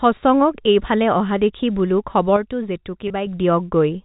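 At 2.37 s, right after "এইফালে অহা দেখি বোলো", a sudden gain jump drops the speech by about 6 dB in a single step, and it stays down until 3.27 s, when it returns just as abruptly. The likely cause is a digital gain setting applied with no ramp. The voice and the background noise fall and rise together, and each edge can carry a small click.

Inside that quieter stretch, at 3.08 s, a 20 ms piece of the stream is missing, which fits one lost packet. Packet loss with pitch repetition fills the gap: the receiver repeats the last pitch period and fades it out instead of leaving silence. Because the gap is so short, it sounds like a brief held, slightly buzzy sustain on the voice before normal speech resumes. All of this sits on G.711 mu-law coding, which keeps everything below 4 kHz.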